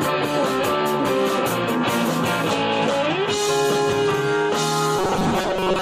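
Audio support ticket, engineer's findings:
Robotic sound from repeated short buffers, 4.99 to 5.81 s. Rigid metallic buzz at 188 Hz. Likely input starvation: a 5.3 ms buffer replays, replacing about half the audio.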